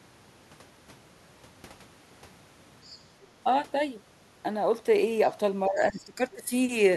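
From 2.85 to 3.01 s, a faint second voice leaks through, well below the talker. This is likely the other side's voice leaking through, loudspeaker echo the canceller missed.

From 5.67 to 6.52 s, the talker's level dips by as much as about 15 dB in places. Speech suppressed in double talk is the likely cause, with the canceller ducking both voices.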